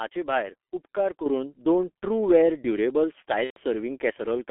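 Throughout, the speech passes through the G.723.1 codec, which codes it in coarse 30 ms frames at a rate that fits 6.3 kbit/s, over a line limited to roughly 250 Hz to 3.4 kHz. The encoder's slowly updated voice model and the narrow band strip away detail, so the whole clip sounds muffled and hoarse. Consonants smear into one another, and the heavy coding damage gives every syllable a rough, grainy edge.

At 1.26 s, the microphone volume is stepped up. The call software judged the input too quiet and raised the device gain by about 7 dB in a single jump. There is no gradual rise, so the speech and the background noise become louder together at that instant. It is heard as an abrupt lift in loudness that the rest of the clip keeps.

From 3.44 to 3.59 s, VoIP packet loss is concealed by the speech codec. About 120 ms of data went missing, which points to roughly four consecutive 30 ms frames. 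The decoder filled the gap by repeating its last pitch and filter while lowering the gain step by step. The speech there turns into a stretched, buzzy tone or coloured noise that fades. The voice stays weak and smeared for a short time after real data resumes, while the decoder's state recovers.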